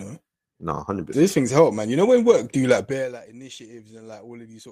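A short bit of speech, and there's nothing technically wrong to point to here, so it can be left as it is.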